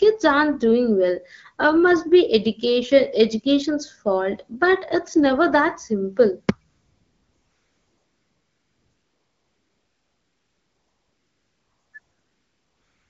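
From 6.69 to 11.93 s, and again from 11.99 s to the end, AMR comfort noise takes over: transmission treated the audio as silence, so the receiver synthesised a smooth, steady hiss in place of the real background. On a spectrogram it appears as flat, featureless bands, and the waveform drops to an even low-level floor.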